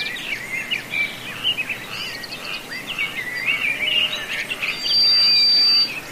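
From 4.66 to 5.94 s a loudspeaker feedback squeal rings at 4.7 kHz, swelling over about a third of a second to roughly 10 dB above the audio as a microphone re-amplifies its own loudspeaker. Unlike steady electrical whine, it builds itself up.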